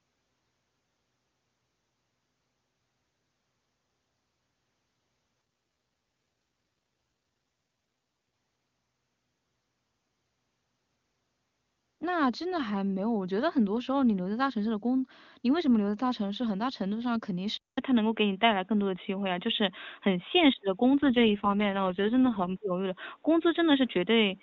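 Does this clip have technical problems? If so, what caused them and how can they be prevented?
Yes. An AMR rate drop occurs from 5.41 to 8.33 s and again from 21.02 to 22.55 s. The speech turns rough and synthetic, which fits the link falling from 23.85 to 6.6 kbit/s. Unlike a device switch, the band stays full and there is no gap. A stronger, more stable radio link prevents this.

At 17.57 s a 200 ms silence is followed by speech with nothing above 3.8 kHz, a level change of roughly 5 dB, and new background noise roughly 45 dB down, lasting to the end. This is likely an input switched to a poorer device. Locking the input device during recording prevents it.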